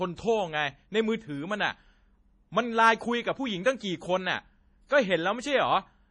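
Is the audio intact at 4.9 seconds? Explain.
No. Pre-echo runs from 4.86 to 4.91 s: the codec spreads noise across its block, so about 43 ms of hiss precedes the attack, smearing it. Throughout, heavy MP3 compression is the likely cause of watery, swirly speech with nothing above 10.4 kHz, consistent with a bitrate around 32 kbps.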